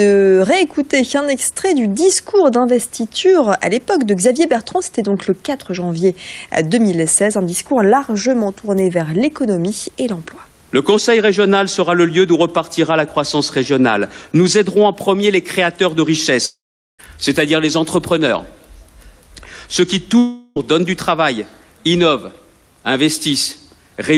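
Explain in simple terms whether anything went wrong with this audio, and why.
At 16.45 to 17.01 s the sound smears into a fading buzz, then goes silent; at 20.19 to 20.58 s it briefly smears again. Both are likely a long network dropout, where the missing audio was patched over and never recovered.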